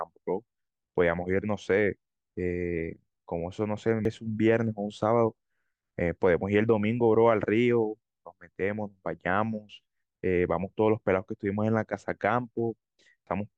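Compressed frames skipped at 4.05 s and 13.27 s: the speech jumps ahead about 0.3 s and then 0.4 s, consistent with losing whole frames of about 85.3 ms.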